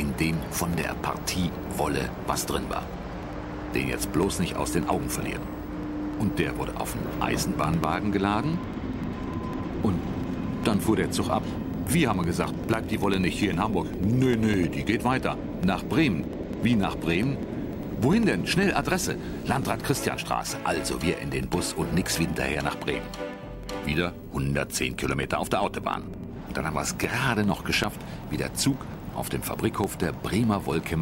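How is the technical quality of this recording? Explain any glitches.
The recording is marred by one recurring glitch. Periodic USB or driver dropouts run from 0.13 to 30.94 s: every 0.1 s, roughly a millisecond of sound drops to silence, around 300 times, producing a steady ticking over the signal.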